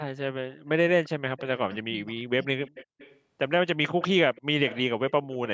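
An echo canceller on the far side, likely driving a loudspeaker, failed to remove all of what its microphone picked up and sent it back. The result is echo leak from 1.05 to 2.21 s: a faint copy of the speech trailing the original by about 0.35 s, sitting roughly 25 dB below it.

While that echo is still present, speech suppressed in double talk sets in from 1.58 to 2.51 s. With both directions active, the canceller likely could not tell the near talker from its own loudspeaker echo, so it turned everything down. For about 0.7 s in total the speech dips by as much as about 25 dB.

The echo leak returns from 2.65 to 3.2 s and again from 4.03 to 5.12 s, with the same 0.35 s lag. It grows louder each time, to roughly 20 dB and then 15 dB below the speech, so the delayed copy becomes easier to hear. The narrow call bandwidth, with nothing above 8 kHz, comes from normal call microphone processing.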